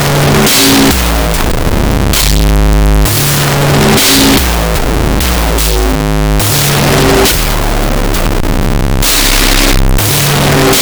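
A music clip with a wrong sample width fault from start to finish. Audio written as 16-bit integers is being read as unsigned 8-bit, so every real sample splits into two. The high bytes carry a rough, distorted trace of the music, while the low bytes come out as dense hiss. With twice as many samples, everything plays at half speed and an octave down, buried under loud noise.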